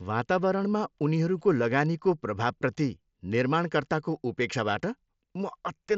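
No faults; the speech tops out near 7.6 kHz, consistent with a wideband Bluetooth headset link running mSBC.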